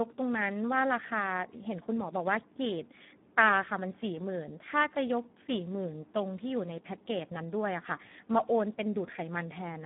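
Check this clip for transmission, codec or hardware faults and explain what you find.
The speech carries one fault that runs through the whole clip: heavy Speex codec damage on a narrowband line.

Speex codec, throughout: the line passes roughly 150 Hz to 3.5 kHz, with nothing above 3.8 kHz, and the coarseness fits a low setting around 8 kbps. At that rate the CELP coder has too few bits to rebuild the excitation, so the speech sounds noisy and hoarse. On a spectrogram the top is sharply empty, and the harmonics look smeared and grainy rather than cleanly striped.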